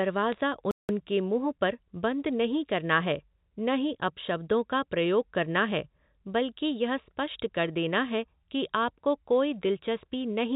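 From 0.32 to 0.41 s the speech carries bit errors on a digital phone line: flipped bits corrupt single samples, and hits on the sign or high bits give sharp ticks heard as brief crackle. The waveform shows isolated spikes; the spectrogram shows thin vertical lines across the band, fitting roughly three errors per thousand bits.

At 0.71 s a playback stall cuts the sound to silence for about 179 ms before it resumes at 0.89 s. The waveform is flat and the spectrogram blank there, likely because the player's buffer ran dry or its thread was blocked. The G.711 mu-law path limits everything to below 4 kHz.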